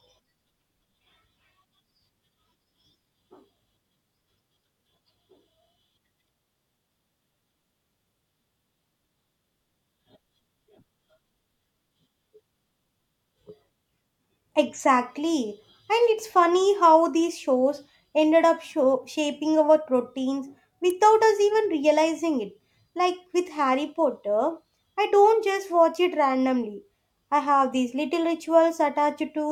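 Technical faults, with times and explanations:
20.90 s, electrical switching spike: a brief, sharp snap peaking around -20 dBFS, likely an arc from a nearby switch or motor coupling into the audio line.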